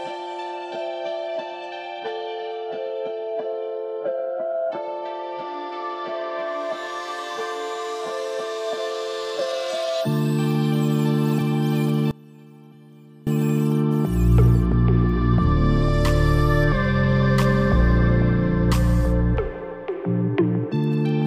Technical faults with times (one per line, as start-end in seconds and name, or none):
12.11-13.27 audio dropout to a faint residue